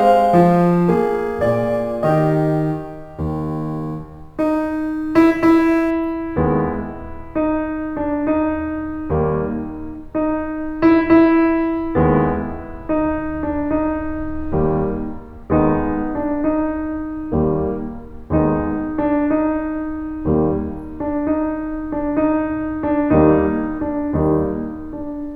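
From 0 to 5.9 s the music carries crude rate conversion: samples dropped or repeated without filtering, fitting a 48 kHz to 44.1 kHz change, leaving an inharmonic fizz well below the music that tracks loud, bright passages rather than hissing steadily.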